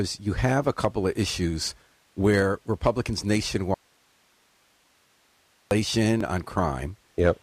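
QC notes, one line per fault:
3.74–5.71 s, audio dropout to a faint residue: the speech cuts abruptly to hiss about 40 dB down for roughly two seconds, likely a lost signal on a still-live path.
3.86 s and 6.21 s, dropped buffer (overrun): a small skip forward, about 10 ms then 15 ms, likely samples overwritten before being read.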